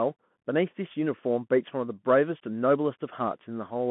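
Throughout, the speech carries Bluetooth CVSD headset codec damage. Band runs roughly 150 Hz to 3.4 kHz, nothing above 3.8 kHz. Slope overload scratches sibilants, and granular hiss underlies everything.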